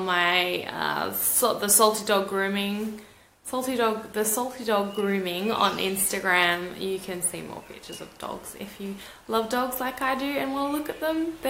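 Nothing is technically wrong with this clip.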